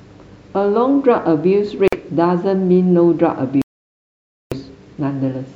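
A speech clip with two likely Bluetooth stalls, where the headphone buffer ran dry: the sound drops to silence for 48 ms near 1.88 s and 900 ms from 3.62 to 4.55 s, then resumes.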